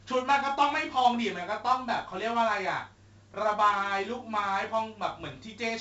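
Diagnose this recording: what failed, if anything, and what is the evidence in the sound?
The codec stage failed: the speech was stored with 4-bit ADPCM, consistent with roughly a 64 kbps stream at a low sample rate. Throughout, a gritty hiss tracks every loud syllable, sharp onsets distort where the step size lags, and nothing is heard above about 7.8 kHz.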